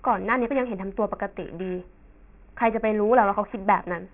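Speech with aliasing throughout: energy above 3 kHz folds back as gritty, unrelated tones roughly 25 dB down, pointing to downsampling to about 6 kHz without an anti-alias filter.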